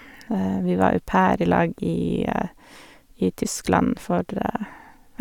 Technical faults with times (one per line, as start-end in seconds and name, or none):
none